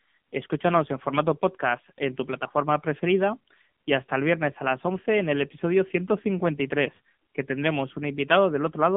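Throughout, the speech carries AMR narrowband mobile codec damage: nothing above 3.8 kHz, thin 200 Hz to 3.6 kHz line band, heavy buzzy, synthetic tone fitting a 6.7 kbps mode.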